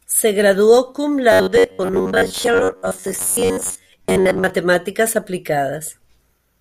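Robotic sound from repeated short buffers runs from 1.32 to 4.50 s, a rigid metallic buzz near 94 Hz that still loosely tracks the speech. This is likely from delayed audio being covered by looping a segment of about 11 ms, replacing most of the real signal.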